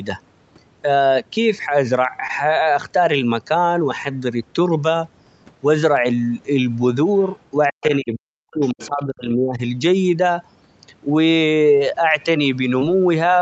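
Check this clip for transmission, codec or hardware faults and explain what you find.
Three kinds of fault appear in this speech clip: short concealed packet loss, the other side's voice leaking through, and speech suppressed in double talk.

Short concealed packet loss, 2.27–2.31 s and 12.79–12.83 s: about 20 ms of audio arrived too late, so the decoder extended the preceding sound to bridge it, leaving a brief smear or wobble.

Other side's voice leaking through, 7.20–7.33 s, 7.81–7.97 s and 8.62–8.88 s: residual loudspeaker echo was likely not fully cancelled. Faint scraps of a second voice appear, about 35 dB below the speech at first and about 20 dB below it in the later two.

Speech suppressed in double talk, 7.71–9.61 s: the echo canceller was likely unable to separate the talker from the echo and pulled the level down. Speech dips and drops out in pieces, by up to about 40 dB, for roughly 1.5 s in total.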